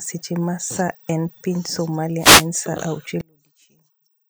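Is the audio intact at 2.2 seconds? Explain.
No. From 2.18 to 2.48 s a wireless microphone noise hit disturbs the speech: the FM radio link fades as reflections cancel, so receiver hiss swells into a brief swish of static. Unlike a digital dropout, it fills with noise rather than cutting to silence.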